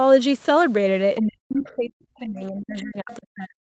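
From 1.21 to 1.92 s the speech drops sharply in pieces, at worst by about 40 dB. This is likely speech suppressed in double talk, with the echo canceller turning down both voices together. From 1.64 to 1.76 s a faint second voice comes through, about 30 dB below the speech. This is likely the other side's voice leaking through, loudspeaker echo the canceller missed. From 2.08 s to the end, the speech again dips deeply, by about 40 dB. This is likely the same double-talk suppression. At 3.11 to 3.15 s a brief scrap of the second voice surfaces, about 25 dB down. This is likely another leak of the other side.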